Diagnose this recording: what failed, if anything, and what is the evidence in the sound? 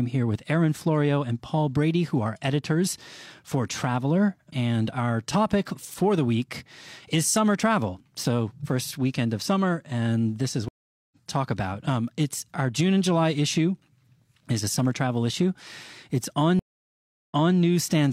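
Two stream reconnects broke this speech at the network and playback stage. At 10.68 s the audio drops out for 429 ms and comes back roughly half a second further on, so a bit of speech is simply skipped, as a live stream would do. At 16.59 s there's a 699 ms gap, and the audio resumes 279 ms earlier, repeating a short stretch. That's the server resending buffered data after the player reconnected and restarted its decoder mid-stream.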